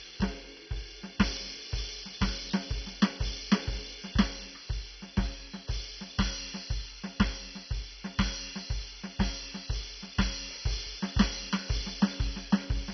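A music clip, dull and gurgling from start to finish, with nothing above about 6.1 kHz. Upper bands flicker out. The likely cause is heavy MP2 compression at a very low bitrate.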